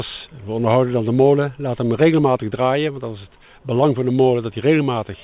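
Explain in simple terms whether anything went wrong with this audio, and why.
Nothing went wrong here: the sound came over an ordinary phone-style call line, which is why nothing above 4 kHz comes through, and that dull, telephone-like top end is normal for this kind of link rather than a fault.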